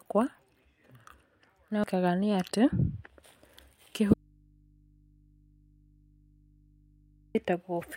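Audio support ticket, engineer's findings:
At 1.84 s the speech lurches forward. Around 0.7 s of audio is missing. Compressed frames skipped: roughly ten whole frames of about 92.9 ms each never reached the output, either absent from the stream or rejected by the decoder as corrupt.

From 4.14 s to 7.35 s (3.21 s) the speech cuts off abruptly and only mains hum remains, about 35 dB below the normal level, before the signal snaps back. This is an audio dropout to a faint residue, likely from the source feed breaking upstream while the input stage stayed live and open, picking up hum.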